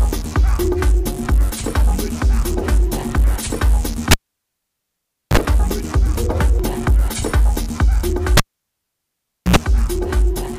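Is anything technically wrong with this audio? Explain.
Yes. The cable was pulled and plugged in twice, at 4.11 s and 8.37 s. A live lead breaks and reconnects, so a pop gives way to near silence (1.21 s, then 1.14 s). As only the tip touches, a brief mains buzz follows, 37 ms at 50 Hz the first time and 77 ms at 60 Hz the second. A second pop marks the sound's return.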